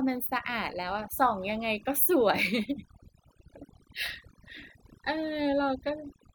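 Throughout, the speech sits over near-silent, twinkling gaps: overdone noise removal, switching off frequency bands near its noise estimate and taking quiet voice detail with them.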